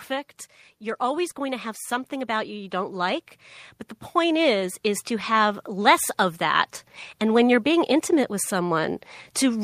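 The automatic gain control judged the input too quiet and raised its gain slowly, twice: by about 5 dB from 0.98 to 3.31 s, then by about 4 dB from 4.12 to 6.74 s. Each time, the speech and background noise swell together gradually.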